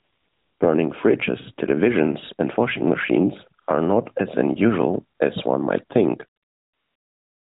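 The clip opens with AMR comfort noise from 0 to 0.60 s: the phone decided nobody was talking, stopped sending speech frames, and the far end filled the gap with a smooth synthetic hiss built from a rough sketch of the background. It cuts in again briefly at 3.62 to 3.68 s and 5.18 to 5.20 s, then runs from 6.40 s to the end, so you hear the real background swap for that flat, even noise. The narrowband AMR coding itself sounds light, which points to the higher 12.2 kbps mode.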